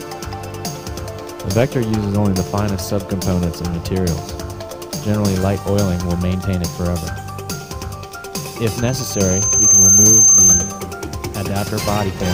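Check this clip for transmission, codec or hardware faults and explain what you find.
One fault is present, a loudspeaker feedback squeal. From 8.70 to 10.87 s, a pure tone at 6.3 kHz swells over about a second. It ends roughly 10 dB above the rest of the sound. A microphone is picking up its own loudspeaker. At 6.3 kHz the loop gain exceeds one, so that frequency keeps feeding itself and grows into a piercing whistle.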